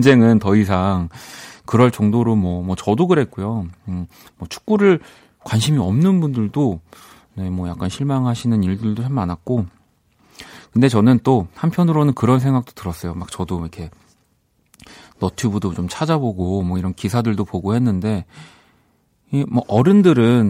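Hard clipping near the end, 19.76 to 20.09 s: speech driven about 2 dB past a stage's limit gets its peaks cut flat, producing crackle. Waveform shows flattened tops; spectrogram shows high-frequency smear.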